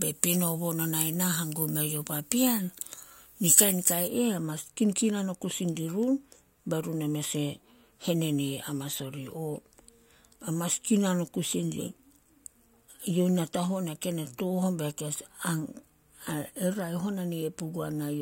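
It's a speech clip, and for the first 4.08 s it's got pre-emphasis left on: the treble sounds like it was boosted on the way in, most likely an FM-style 75 µs curve, and never cut back, so it's about 14 dB hot at 10 kHz, thin and very sibilant.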